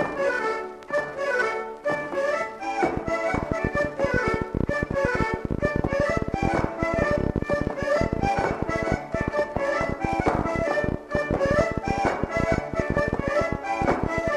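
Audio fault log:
2.97–14.29 s, train of clicks: an uneven ticking of similar sharp pops, about 13.3 per second and roughly 150 in all, stands out around 15 dB above the sound, pauses included; likely interference from nearby equipment or a faulty connection or power supply injecting pulses.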